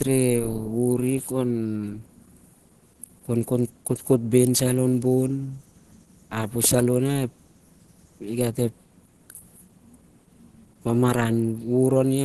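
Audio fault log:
Throughout, Opus compression: the speech sounds muffled and hoarse, with a grainy, rough edge on its brighter parts and plainly audible damage. This likely comes from an Opus encoder in its hybrid speech mode, a super-wideband setting that fits a rate of around 16 kbps.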